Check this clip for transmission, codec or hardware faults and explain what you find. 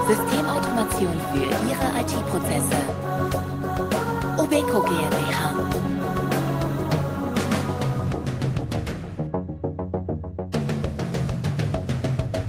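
Nothing in this clip points to a transmission, codec or hardware fault. No event stands out anywhere in the audio that would need an explanation from the signal chain.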